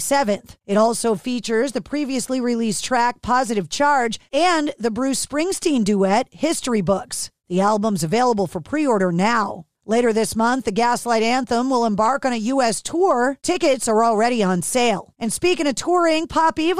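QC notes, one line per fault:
No technical faults are present anywhere in the signal.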